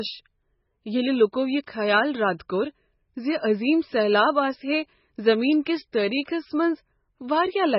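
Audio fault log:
Throughout: MP3 compression. The speech is heavily degraded, and nothing is heard above 5.6 kHz. Weak frequency lines drop in and out between frames. That gives a watery, swirly sound. The likely cause is MP3 encoding at a very low bitrate, which fits roughly 16 kbps.
1.66 s: pre-echo. It falls just after "ییٚلہ لوکو یہ" and before "خیال رد کوٚر ز". A brief hiss leads a sharp onset by 10 ms. The codec spread its noise across the whole block, so the quiet moment before the attack fills with it. The onset sounds smeared.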